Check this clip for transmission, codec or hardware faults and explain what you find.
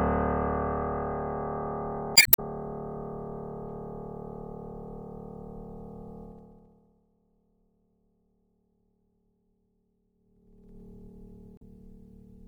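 Three kinds of fault are audible in this music clip: codec artefacts throughout, two bursts of corrupted stream data, and two stretches of zipper noise.

MP3 compression, throughout: the sound swirls and smears on attacks, likely from MP3 encoding at a low bitrate, around 64 kbps, where weak frequency lines drop in and out between frames.

Damaged data in a compressed stream, 2.13 to 2.39 s and 11.55 to 11.62 s: the decoder misreads corrupted frames and resynchronises, giving a brief squawk or blip.

Zipper noise, 6.22 to 7.08 s and 10.12 to 10.82 s: the level falls and then rises by roughly 25 dB in unsmoothed 2 dB steps, about 15 to 20 a second. Each step clicks, producing an audible ticking.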